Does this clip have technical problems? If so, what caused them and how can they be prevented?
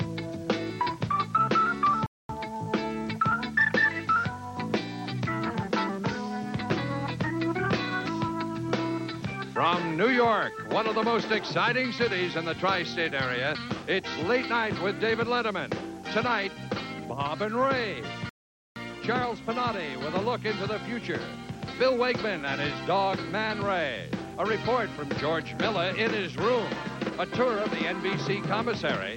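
Yes. There are two rebuffering stalls, at 2.06 to 2.29 s and at 18.29 to 18.76 s. Each time the sound drops to silence and then picks up right where it left off, so nothing is missing; the clip just gets longer, by 230 ms the first time and about 470 ms the second. That's the player draining its buffer and waiting for more data to arrive. A bigger startup buffer or adaptive bitrate switching would keep it from running dry.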